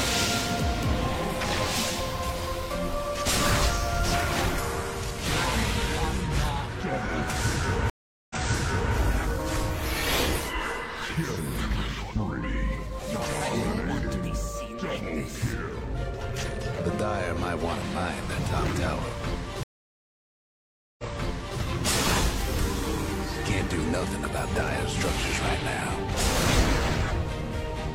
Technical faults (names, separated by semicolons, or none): stream reconnect